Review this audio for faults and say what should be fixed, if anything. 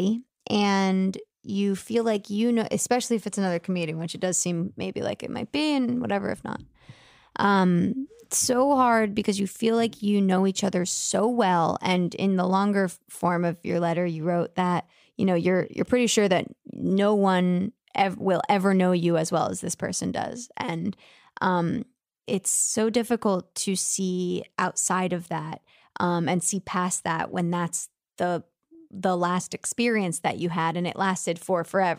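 No faults; nothing to fix.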